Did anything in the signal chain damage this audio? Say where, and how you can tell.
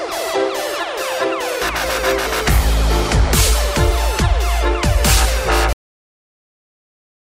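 Yes. A cut-off end at the buffer or storage stage: the final buffers were never written out, so at 5.73 s the sound stops mid-event and falls straight to digital silence with no decay, holding that silence for the remaining 1.6 s.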